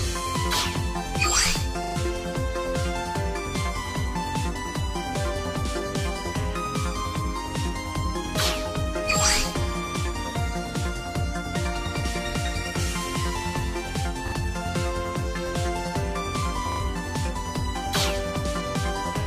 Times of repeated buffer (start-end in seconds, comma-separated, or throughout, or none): 1.84-1.96, 14.28-14.32, 16.72-16.80